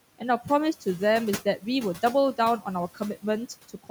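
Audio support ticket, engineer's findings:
Noise suppressor artifacts throughout speech. Background cut about 16 dB in pauses, swells back under speech as per-band gain opens. Suppressor working against room noise only about 16 dB down.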